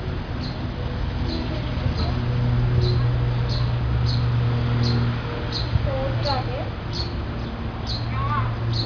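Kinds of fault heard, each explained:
No technical faults can be heard in the audio; the signal keeps its continuity, with nothing breaking or disturbing it at any point.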